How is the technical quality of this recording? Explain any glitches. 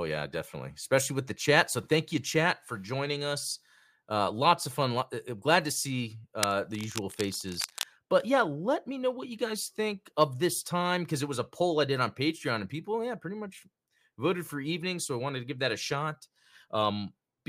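One glitch stands out in the speech: cable scratch noise from 6.41 to 7.85 s, between "glad to see" and "but yeah let me". Rapid contact-resistance changes in a likely worn connector add rough scratching roughly 10 dB below the speech, seen as dense, ragged broadband bursts on a spectrogram.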